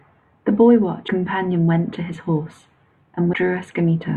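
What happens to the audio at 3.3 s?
At 3.32 s the speech gives a brief blip from damaged data in the compressed stream. The decoder misreads corrupted bytes, loses frame sync and resynchronises.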